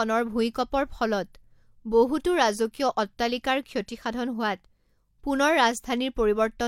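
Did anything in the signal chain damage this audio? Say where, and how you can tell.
No, there's no audible damage from any stage of the chain in this speech recording.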